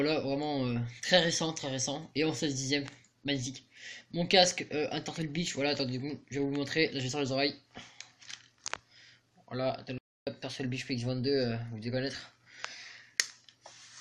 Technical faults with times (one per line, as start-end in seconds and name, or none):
9.98-10.27 playback stall